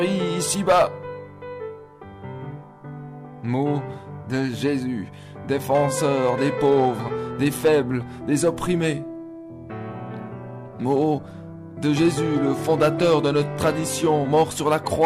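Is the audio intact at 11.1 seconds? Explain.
No. Hard clipping runs from 10.90 to 11.13 s. The signal there exceeds what the stage can pass by about 1 dB, so the peaks are sliced flat. The squared tops add high harmonics, heard as a brief crackle on the loudest moments.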